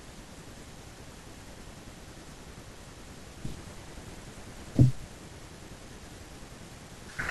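A speech recording with nothing technically wrong with it.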